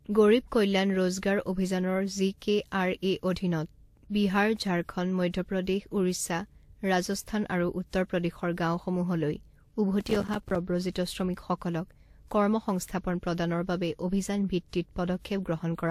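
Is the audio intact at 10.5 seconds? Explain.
No. From 10.00 to 10.56 s the processor fell behind and missed about 30 buffer deadlines again and again. Each missed buffer was replaced with silence, and the length of each gap fits small buffers of around 5 ms. The result is processor overload crackle: a dense burst of tiny hard-edged dropouts that sounds like gritty tearing over the speech and stops once the load eases, just past 10.5 s.

At the same moment, and across the whole clip, the audio has likely passed through transcoding between lossy codecs. It was probably WMA at 96 kbit/s and then re-encoded as Vorbis at 46 kbit/s. The second, leaner encoder spent its limited bits on the first encoder's artefacts as well as the speech, so the two sets of artefacts are heard together, and nothing remains above 16.5 kHz.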